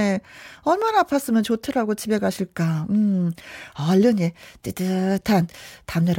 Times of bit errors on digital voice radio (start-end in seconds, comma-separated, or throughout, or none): none